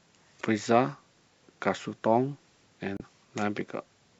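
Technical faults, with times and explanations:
0.38–0.42 s and 2.97–3.02 s: damaged data in a compressed stream. Two brief glitches of about 40 and 50 ms cut into the speech where corrupted bytes made the decoder misread frames and lose sync until it locked onto a valid frame header again. On a spectrogram each appears as a narrow vertical disturbance that is unrelated to the surrounding harmonics. The waveform shows a short, abrupt discontinuity at each point.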